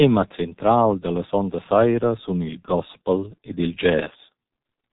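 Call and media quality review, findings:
Muffled, hoarse speech throughout, consonants smeared, no energy above about 3.8 kHz. Probable component: G.723.1 codec, heavy coding damage consistent with roughly 6 kbit/s. Mechanism: 30 ms frames, slowly updated vocal model, band-limited output discarding high-frequency detail.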